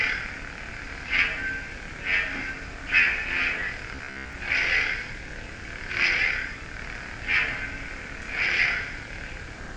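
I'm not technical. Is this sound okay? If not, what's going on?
No. From 3.95 to 4.33 s the sound turns into a rigid, metallic buzz at about 67 Hz: robotic sound from repeated short buffers, likely from the same 15 ms chunk replaying.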